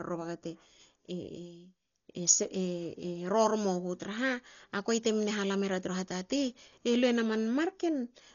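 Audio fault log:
Throughout, Dolby Digital compression: the speech sounds dull and boxed in, with nothing above about 6.9 kHz, and there's a rough, fluttering hiss hanging around the voiced sounds. That's heavy codec damage of the sort you'd expect when a 40 kbps stream likely went through AC-3 style coding. At that rate the encoder chops the top of the band off and starves a lot of frequency lines of real detail, so the decoder pads them with noise, which is where the grainy flutter comes from.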